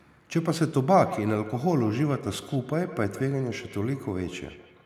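From 1.03 s on, feedback echo between two devices: a nearby device replays the signal, which returns roughly every 150 ms, about 15 dB quieter.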